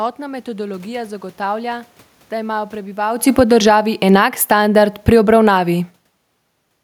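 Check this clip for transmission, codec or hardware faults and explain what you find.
Two automatic gain control faults overlap in the second half of this speech clip.

From 3.23 s to 6.56 s, just after "metodologija zagotavlja da imajo", the speech and the room noise behind it sink together by about 9 dB over more than three seconds. This is automatic gain falling. The gain stage judged the input too loud, or its background noise too strong, and pulled its gain down slowly. Because the whole signal drops at once, the background fades with the speech. A talker simply moving, as happens around 3 s, would not make that happen.

Between 3.75 s and 5.86 s, in the middle of that slide, the level swells back up by about 3 dB over roughly two seconds, with speech and background rising as one. This is automatic gain rising. The control reacted to the quieter input and raised its gain gradually. 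This partly undoes the downward correction before the fall resumes, so the loudness pumps unevenly instead of settling.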